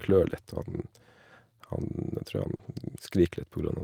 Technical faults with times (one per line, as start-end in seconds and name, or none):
0.69-0.79 lost packet rebuilt from error correction
2.55-2.61 short concealed packet loss
2.59-2.69 lost packet rebuilt from error correction